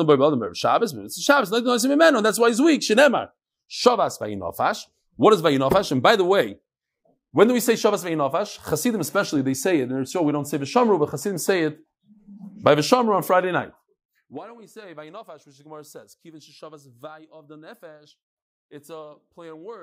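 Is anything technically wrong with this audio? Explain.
No, nothing technically wrong turns up in this speech recording. The level holds steady throughout, with no fader-like dips or rises in loudness.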